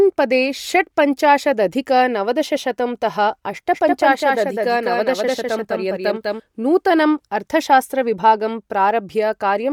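Through the whole speech clip the audio has likely passed through Bluetooth LC3 compression, the LE Audio transform codec, working in 10 ms frames at a rate that fits about 48 kbps. At that rate the encoder discards much of the upper spectrum and fills the gaps with shaped noise. The damage is plainly audible: the voice carries a breathy, grainy edge, and its top end sounds synthetic rather than clean.

From 3.74 s, just after "पदे षट्पञ्चाशदधिक नवदशशतं तः", to 6.40 s, just before "नूतनम् अर्थशास्त्रविभागं", a doubled audio track appears. A second, full-band copy of the same speech was likely mixed in by a slower capture path or a misaligned edit. It trails the original by about a fifth of a second and sits roughly 5 dB quieter. It has no decay or room colour, and it cuts in and out abruptly at both ends.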